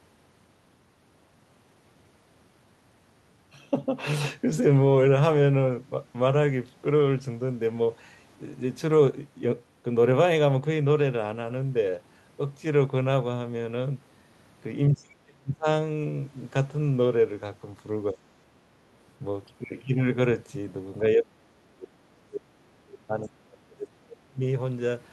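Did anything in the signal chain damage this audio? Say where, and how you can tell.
Yes, in call processing. Speech sinks by up to about 40 dB at 14.94–15.67 s, 18.12–18.56 s and 21.15–24.42 s, leaving near-empty spectrogram gaps and a flattened waveform. This is likely speech suppressed in double talk, where the echo canceller ducked the near talker.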